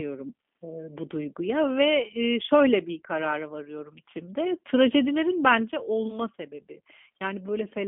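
From start to finish the speech goes through what sounds like the G.729 codec, and the damage is plainly audible. Nothing gets above about 3.6 kHz, on a 200 to 3400 Hz line band. The voice is rebuilt from a filter model plus a few pulses per frame, so it comes out rough and slightly synthetic, at the kind of 8 kbit/s rate that fits G.729A.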